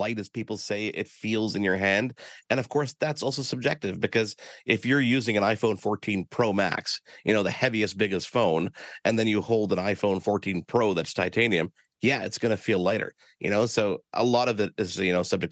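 Speech recorded through call microphone processing, with nothing above 8 kHz, shows automatic gain rising from 0.47 to 4.46 s, just before "if you're using an". The gain control judged the input too quiet and slowly lifted it by about 6 dB. Voice and background noise swell together over several seconds, which tells it apart from a speaker simply growing louder.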